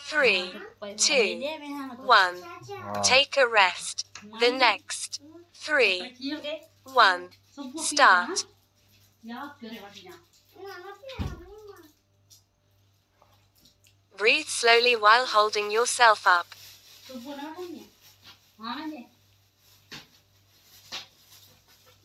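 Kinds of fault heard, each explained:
skip ahead: At 6.39 s roughly 0.7 s of audio is dropped and playback jumps forward with no gap, the two sides joined almost directly.
jitter buffer speed-up: From 6.60 to 7.43 s the receiver repeatedly trims short pitch-period pieces, so audio runs at 110% speed with unchanged pitch, shedding roughly a tenth of a second.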